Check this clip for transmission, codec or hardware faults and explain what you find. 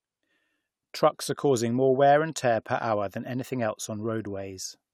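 No faults can be heard anywhere in the speech.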